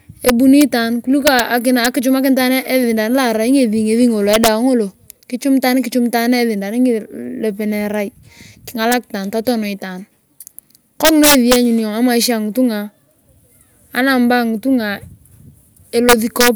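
Integer overflow cracks the speech at 0.29–0.62 s (before "itaan kuliko"), 1.27–1.40 s, 1.85 s, 4.33–4.48 s, 8.92 s, 11.05–11.56 s and 16.09–16.48 s. Peaks about 1–4 dB over full scale wrap to the opposite sign, giving violent cracks.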